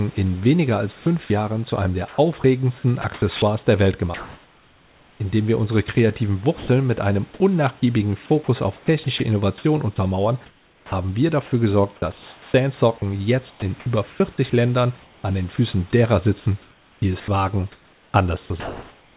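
Sound chopped by the voice detector, 0.92 to 5.2 s: the sender's voice detector likely kept switching transmission off and on. Across this stretch, 1.56 s of quiet speech and word edges is swapped for comfort noise, so the speech turns choppy with comfort noise between the fragments.

Sound dropped by the voice detector, 6.58 to 6.68 s, between "wir unsere kreativen" and "mit einem": the detector likely mistook a soft stretch of speech for background and stopped sending. A 100 ms patch of steady comfort noise fills the gap, and 60 ms of speech is lost.

Sound chopped by the voice detector returns three more times, each likely caused by the detector toggling again. From 8.44 to 12.54 s, 1.22 s is replaced. From 13.5 to 15.74 s, ending just before "derer sitzen", 0.48 s is replaced. From 16.62 to 19.16 s, after "derer sitzen", 1.47 s is replaced. Each stretch has the same stuttering alternation between real speech, band-limited to about 4 kHz by the call codec, and synthetic noise.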